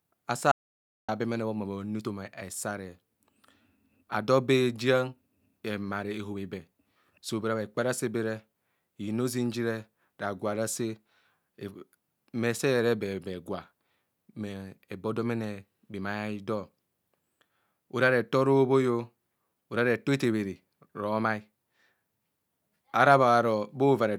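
A speech clip with an audio dropout to silence from 0.52 to 1.09 s, cutting 0.57 s of sound mid-flow. The gap is silent with no room tone, unlike a natural pause or gated noise floor. The cause is likely a briefly lost input connection.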